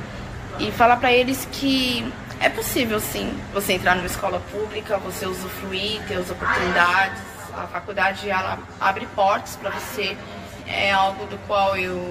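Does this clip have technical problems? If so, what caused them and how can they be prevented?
Yes. From about 4.20 s to the end, the sound turns hollow and phasey from channel delay (comb filtering): one channel arrives roughly 10 ms late, and summing the two to mono cancels shared content at evenly spaced frequencies, the first notch near 40 Hz. A spectrogram shows fixed, regularly spaced dark horizontal bands from 4.20 s on. To prevent it, time-align the channels before any mono fold-down and check the phase correlation.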